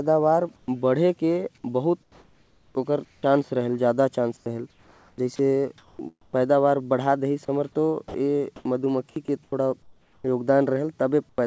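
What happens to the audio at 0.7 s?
Just before 0.7 s, from 0.56 to 0.68 s, comfort noise in place of the background replaces the real room sound with a steady, featureless hiss about 15 dB quieter, likely from discontinuous transmission. From 0.65 to 0.68 s, the onset is clipped by the voice detector: the first 30 ms of the returning speech is missing, so it starts abruptly, likely because detection lagged.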